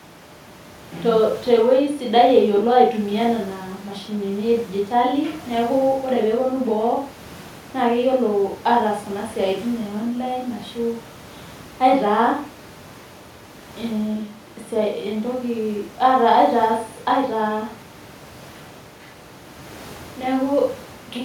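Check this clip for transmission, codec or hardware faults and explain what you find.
No transmission, codec or hardware faults can be heard in the speech, and the faint background noise of the room, about 25 dB below the speech, is part of the recording itself.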